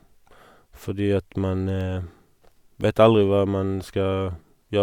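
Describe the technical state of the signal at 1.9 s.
Periodic USB or driver dropouts: a background task stalls the audio path once a second from 0.81 to 3.81 s, blanking a fraction of a millisecond with silence, heard as regular ticks in the speech.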